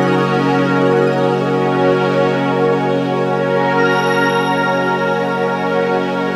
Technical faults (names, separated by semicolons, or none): audio read two samples at a time (double speed)